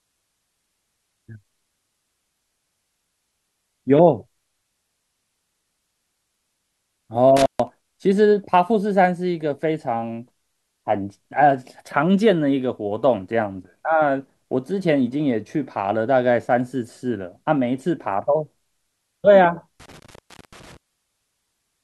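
A speech recording with two dropouts that sound like an intermittent contact, a loose cable or plug briefly losing connection. Around 7.37 to 7.68 s the signal crackles, goes dead for about 137 ms, then crackles back in. The same thing happens again from 19.80 to 20.77 s, with a longer gap of about 424 ms. Each time the line opens, the sound drops away to faint hiss instead of true silence.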